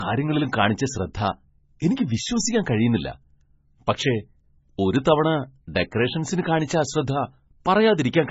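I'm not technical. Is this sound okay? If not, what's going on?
No. Low-bitrate audio saved at a high bitrate runs through the whole clip. The speech sounds dull and smeared, with nothing above about 7.6 kHz, so the crisp top of consonants is gone. This was likely a heavily squeezed MP3 copy later re-saved as a much larger MP3. Re-saving can't bring back what the first squeeze discarded, so the bigger file keeps the same muffled, lossy sound.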